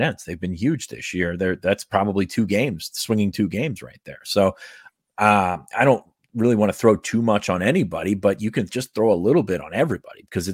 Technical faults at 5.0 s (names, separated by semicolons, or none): none